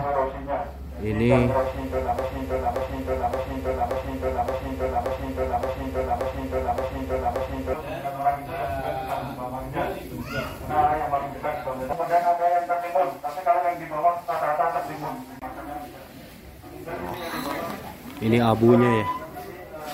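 A playback, encoding or streaming stage likely stalled and kept resending the last fragment it held, producing a broken-record loop in this audio: from 2.19 s to 7.74 s, a 0.57 s piece repeats exactly ten times back to back, and the sound meant for that span is lost.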